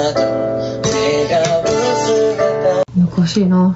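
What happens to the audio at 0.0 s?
At 0.0 s the audio is already showing gain pumping, which runs through the whole clip. The level rises and falls by around 5 dB, squashing loud and soft passages toward one level. This is likely a fast limiter or compressor clamping down on input gain set too high for the microphone. The 8 kHz upper limit reflects the call path's bandwidth.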